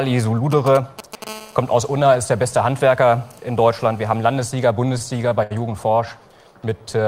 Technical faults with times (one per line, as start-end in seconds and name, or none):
0.52-1.24 GSM signalling bursts
1.27-4.47 GSM phone buzz
4.87-5.52 repeated stalls (stutter)
6.70-7.07 jitter buffer slow-down